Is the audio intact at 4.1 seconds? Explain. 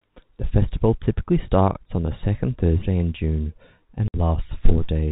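No. From 4.08 to 4.14 s there is packet loss filled with silence. About 60 ms of the speech, consistent with three 20 ms packets, drops to dead silence with hard edges. Concealment would instead smear or repeat the surrounding sound across the gap.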